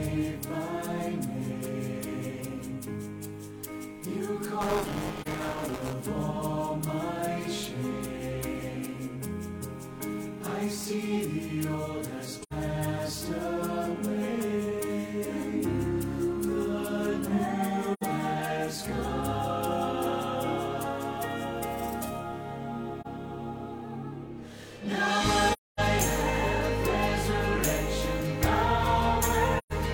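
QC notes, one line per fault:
4.61–5.93 s, buffer tearing: a rattly 188 Hz buzz, fitting a 256-sample buffer, where the writer and reader slipped so a small slice of each buffer replays audio from about 20 ms earlier.
5.21, 12.43, 17.93, 23.01, 25.53 and 29.58 s, AAC frame loss with muting: short dips and soft-edged holes of about 43, 85, 85, 43, 256 and 128 ms, where lost frames were zeroed and the overlapping windows fade the sound out and back in.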